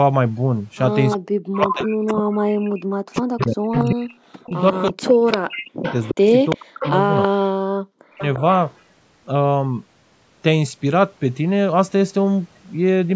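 From 1.11 to 7.28 s a fainter copy of the speech trails the original by 349 ms, sitting roughly 10 dB below it, and it returns more weakly, about 15 dB down, from 8.2 to 8.74 s. This is echo leak, likely from a far end on loudspeaker whose echo canceller let part of its microphone pickup back into the call. Overlapping the first echo, from 1.21 to 8.22 s, the main speech repeatedly sinks and breaks up, dropping by as much as about 40 dB for around five seconds in total. This is speech suppressed in double talk: with both sides active, the canceller likely could not tell the talker from the echo and attenuated both.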